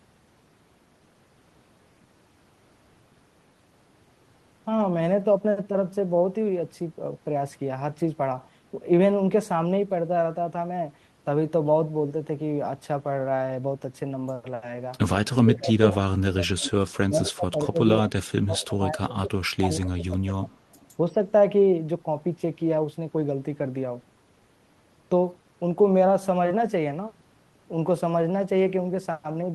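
From 15.23 to 16.73 s, 17.07 to 17.8 s, 17.97 to 19.4 s and 19.56 to 20.63 s, the speech sinks by roughly 15 to 30 dB. That's likely speech suppressed in double talk, where the canceller ducks the talker along with the far side. During and after those dips, at 18.59 to 18.65 s and 20.72 to 20.87 s, there's likely an echo leak: faint scraps of speech trailing by 177 ms, about 25 to 35 dB down.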